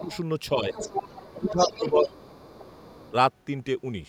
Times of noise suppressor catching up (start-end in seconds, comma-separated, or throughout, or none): none